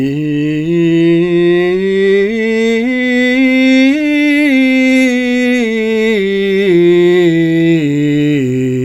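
From 1.01 s to 5.01 s the adaptive stream drops to a lower bitrate: the player switches to a leaner encoding when the connection slows, and the music changes quality abruptly with no gap. Nothing above 16.3 kHz survives, the remaining treble takes on a synthetic, reconstructed sheen, and codec artefacts thicken. That character fits a move from roughly 96 kbit/s AAC to about 32 kbit/s HE-AAC, which rebuilds its highs from the lower band.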